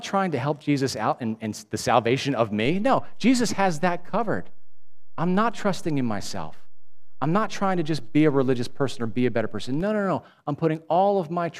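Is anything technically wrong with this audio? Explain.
Yes, there is a DC step. At 2.66 s the waveform's zero line jumps to a fixed offset of about -28 dBFS, as happens when a converter recalibrates or an input carrying a DC offset is switched into the path. The offset holds until 9.81 s, then drops back to zero. Each sudden shift of the baseline is heard as a low thump or click, one at the onset and one at the return, riding under the speech.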